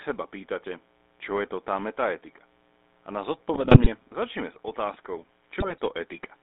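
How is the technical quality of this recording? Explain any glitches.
Technically it's pretty rough: the speech has a constant buzz, plainly audible phone-codec coloring, two bursts of digital garbage, and a change in tone near the end.

Mains buzz runs the whole way through. It's a raspy 60 Hz buzz sitting around 30 dB under the speech. Switching spikes from something like a dimmer or rectifier leaked in twice per cycle, so the harmonics climb well up the spectrum instead of staying a low hum.

The GSM full-rate codec also colors everything, and plainly so. The band runs only from about 250 Hz to 3.7 kHz, and the result points to a 13 kbps stream. The codec rebuilds the voice from a vocal-tract model fed by sparse, evenly spaced pulses, which gives it that gravelly, buzzy grain.

GSM bit errors hit at 3.54 to 3.87 s, just before "začneme s", and again at 5.6 to 5.8 s. Corrupted bits got into the decoder's filter, pitch and gain values, so for 16 frames and then 10 frames the spectrum warps and the level jumps. 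You hear squawks, pops and a gargly mess.

From 4.65 s, right after "začneme s", to the end, the sound goes duller and boxier, with nothing above 3.8 kHz. There's no gap and no real level change, but a new noise floor appears roughly 40 dB down. The likely cause is that the input switched to a poorer device mid-recording.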